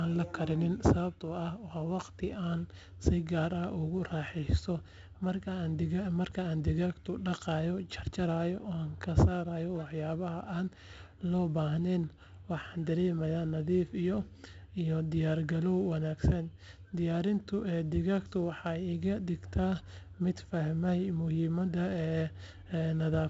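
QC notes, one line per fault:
Throughout: 4-bit ADPCM compression. Each sample is coded as a small step from a predicted value, so the speech carries a gritty hiss that rises and falls with its level. The damage is heavy. Sharp onsets distort where the step size cannot grow fast enough. Nothing is left above 7.8 kHz, which fits a 16 kHz sample rate at 64 kbps, so the top end sounds dull and muffled.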